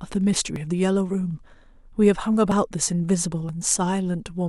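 At 0.56, 2.52 and 3.49 s the speech skips forward by about 20 ms, joined straight across with no gap, which points to audio missing between chunks, likely from a recorder handing over 1.0 s blocks. The later two skips fall about a second apart. On a waveform each appears as an abrupt change in the cycle shape; on a spectrogram, harmonic traces break and resume offset at a sharp vertical seam.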